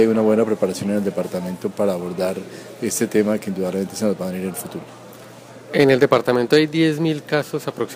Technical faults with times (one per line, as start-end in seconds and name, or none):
5.79-6.58 hard clipping